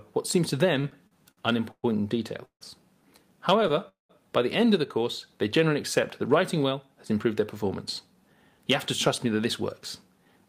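Repeated stalls (stutter) from 0.81 to 1.85 s: packets arrived late five times, and the receiver stretched the last sound to fill 257 ms, the longest gap 120 ms. The sound drags and hitches for about a quarter of that stretch.

A call audio freeze at 2.45 to 2.63 s holds the sound as a fading buzz, then 90 ms of silence, before it resumes. This adds 156 ms, likely from packets held up until the jitter buffer ran empty.

Repeated stalls (stutter) again from 3.54 to 3.79 s, with five brief gaps of at most 13 ms, filling 38 ms in total. It drags and stutters.

A second call audio freeze at 3.89 to 4.11 s repeats the fading hold, this time with 140 ms of silence, and adds 208 ms.

Jitter buffer speed-up at 6.29 to 7.64 s plays at 106% speed. Pitch-period slices totalling about a tenth of a second were trimmed to cut the accumulated delay, so the sound feels slightly hurried.

Jitter buffer speed-up at 8.07 to 8.59 s is stronger, at 112%. 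Under a tenth of a second was removed, and the sound is noticeably rushed at unchanged pitch.

Jitter buffer speed-up at 9.08 to 10.47 s runs at 108%. Roughly a tenth of a second was trimmed, and the sound presses forward with the same pitch.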